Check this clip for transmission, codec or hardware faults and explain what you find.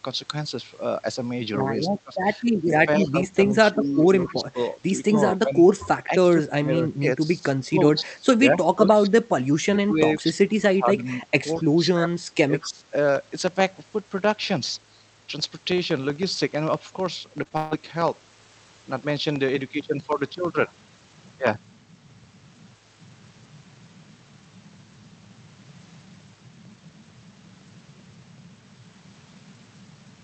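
Four kinds of fault are audible: double-talk suppression, echo leak, short concealed packet loss, and a packet-loss burst. All of them sit on top of the call codec's top-end limit near 8 kHz.

Speech suppressed in double talk runs from 1.81 to 12.85 s, with about 5 s of that stretch audibly turned down. The talker's level sinks by up to about 20 dB in patches, and the speech thins or breaks off while the far side is active. The likely cause is the echo canceller failing to separate near-end speech from loudspeaker echo, so it attenuated both together.

Echo leak appears as a faint delayed copy of the speech, 223 ms behind the original. It shows up in five places: 3.06 to 3.10 s, 3.84 to 4.34 s, 7.97 to 8.03 s, 11.56 to 11.63 s, and 12.61 to 12.68 s. It sits about 25 dB below the speech, and about 30 dB below at 11.56 s. This is likely residual loudspeaker pickup at the far end that the canceller did not remove and sent back down the line.

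Short concealed packet loss occurs twice, overlapping, between 17.43 and 17.53 s. Each event is a 20 ms gap, about one frame. The decoder bridged the gaps with 13 ms and 17 ms of extrapolated signal, continuing the previous waveform before crossfading back into real audio. The result is a brief smear or wobble rather than a dropout, and a short consonant in that spot can lose its definition.

A burst of packet loss follows immediately, from 17.57 to 17.73 s, with about 140 ms of audio missing. The receiver filled the hole with roughly 141 ms of concealment, carrying the last sound forward and fading it as the gap lengthened. There is no silence. Instead a held buzz or hiss tails off, and the speech resumes further along with the intervening material gone.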